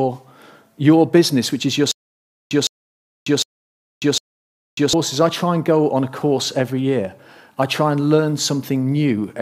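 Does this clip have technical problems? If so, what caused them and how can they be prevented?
Yes: from 1.92 to 4.93 s there's a stutter with silent gaps, where a 0.16 s burst repeats four times, each followed by about 0.59 s of dead silence. That's likely a stalled stream replaying its last fragment on each retry, so the real audio there is lost. More buffering or a steadier connection would prevent it.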